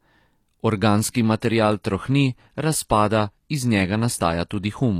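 At 0.96 s the speech suddenly loses its top end, with nothing above 14.9 kHz, and the treble turns thin through to the end, with no gap. This is an adaptive stream at a lower bitrate, fitting a drop from full-rate AAC to low-rate HE-AAC.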